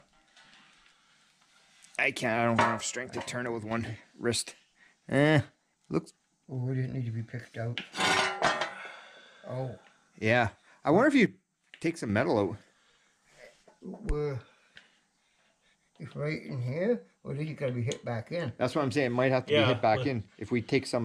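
From 3.22 to 3.71 s and again from 11.26 to 12.09 s, the sound abruptly drops by about 6 dB and then snaps back. The waveform envelope shows a sharp step down, and the spectrogram dims evenly across all frequencies. The likely cause is that one channel drops out before the mono sum.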